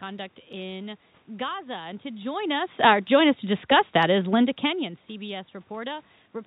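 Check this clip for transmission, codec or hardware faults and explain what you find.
I find no faults in this speech recording. Nothing is heard above about 4 kHz, as expected of a narrowband call path such as G.711, and the level changes around 2 s and 4.5 s come from the talker moving relative to the microphone.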